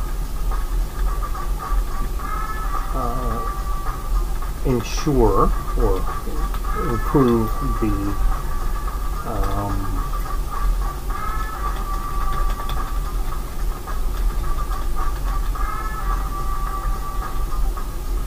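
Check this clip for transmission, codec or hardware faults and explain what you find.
Three isolated clicks stand out, at 6.85 s, 10.27 s and 11.55 s, and each most likely comes from dropped samples. At each point a tiny slice of the stream, a fraction of a millisecond, appears to be missing, so the waveform leaps straight from one value to a later one instead of moving smoothly between them. That gap is too brief to remove any audible sound, but the sudden step in the signal is heard as a single sharp tick and would show as a thin vertical line across the spectrum.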